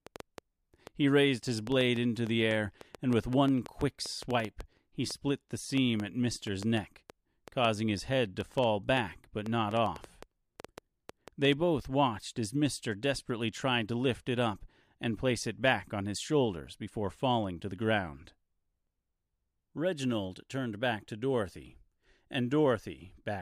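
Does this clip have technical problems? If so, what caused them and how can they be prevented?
Yes. A train of clicks runs from 0.07 s to 11.5 s, ending just before "both watched as". Around fifty similar pops arrive unevenly at about 4.4 per second, some peaking roughly ten decibels above the speech, likely from electrical interference or a faulty connection or power supply. To prevent it, move recording gear away from interfering equipment, use shielded cables, and check the interface's connection and drivers.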